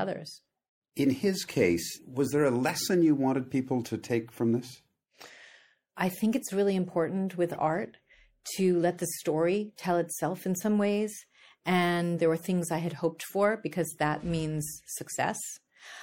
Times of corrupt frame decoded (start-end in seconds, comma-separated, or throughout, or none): 7.49-7.56